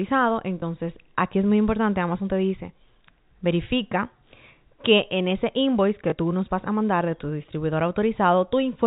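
At 0.60 to 0.62 s and again at 6.10 to 6.12 s, packet loss with last packet repeated: the receiver replayed the previous packet to cover a 20 ms gap, which fits a single lost packet. Each repeat gives a brief blip over the G.711 telephone band.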